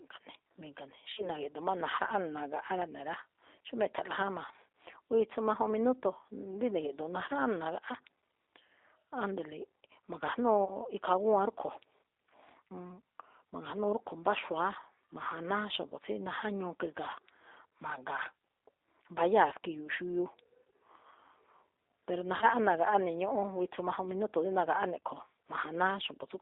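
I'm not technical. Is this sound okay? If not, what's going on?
No. The G.729 codec, a phone-call compressor, is audible for the whole clip. It keeps only a narrow band from about 300 Hz to 3.7 kHz and rebuilds the speech from a simple model of the voice, so it sounds thin, rough and slightly synthetic.

VoIP packet loss concealed by the speech codec occurs at 1.13 to 1.30 s, 10.65 to 10.76 s, 22.37 to 22.46 s and 24.99 s. Short chunks of the call, 20 to 40 ms each, went missing. The decoder filled each gap by stretching the last sound into a fading buzz or noise, and the speech stays weak briefly afterwards.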